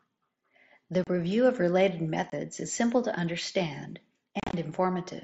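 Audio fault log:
1.04 to 1.07 s: unconcealed Bluetooth headset packet loss. About 30 ms of sound drops out. Lost voice packets were replaced by silence or an idle pattern, leaving a hole with hard edges.
2.30 to 2.32 s: unconcealed Bluetooth headset packet loss. A shorter gap of about 22.5 ms, cut abruptly.
4.40 to 4.54 s: unconcealed Bluetooth headset packet loss. About 105 ms goes missing in pieces across 135 ms, the longest run 30 ms. The scattered gaps make the sound chopped and crackly.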